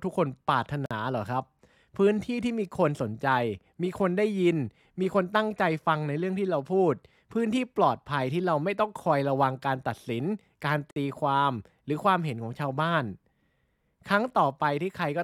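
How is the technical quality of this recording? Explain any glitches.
The speech is interrupted twice by short silences from a gap at a join of encoded pieces. The first runs from 0.86 to 0.91 s (about 48 ms) and the second from 10.91 to 10.96 s (about 54 ms), ten seconds apart. Each piece was encoded on its own and butted together untrimmed, so encoder start-up delay and end-frame padding remain as a hole. The sound drops out with smeared edges, then resumes where it stopped.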